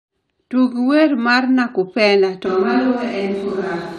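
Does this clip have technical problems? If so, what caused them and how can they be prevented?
Yes. From 2.46 s to the end, the speech abruptly turns roomy and hollow, with thinner bass and room noise rising to roughly 25 dB below the speech, while the overall level barely changes. This is likely a switch to a distant microphone after the close mic dropped out. A bass cut would thin the sound without adding room echo or noise, so the sudden roominess points to a different mic. Monitoring a backup lavalier or the close-mic feed prevents this.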